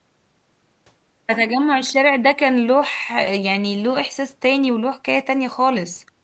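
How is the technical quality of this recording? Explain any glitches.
Nothing stood out as a glitch on listening to this speech recording, whose high frequencies stop at about 8 kHz, as expected when audio has passed through a call's microphone processing and codec.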